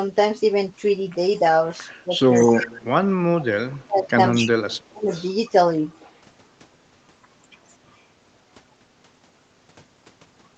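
From 1.88 to 2.03 s a faint delayed copy of the speech, about 35 dB down and trailing by 239 ms, is an echo leak, likely from a far-end loudspeaker whose echo canceller let it through. It returns louder, about 10 dB down, at 2.4 to 2.65 s and 4.33 to 4.5 s, and about 20 dB down at 5.12 to 5.3 s. What sets it apart is the added second voice at a fixed lag.

Alongside these, the speech suppressed in double talk works the other way and removes sound. The talker sinks by roughly 10 dB at 2.05 to 2.31 s, then by roughly 30 dB at 2.58 to 2.97 s and 3.47 to 4.18 s, and by roughly 35 dB at 4.39 to 5.1 s. The voice dips or drops out in pieces, likely because the canceller ducked both sides while they overlapped.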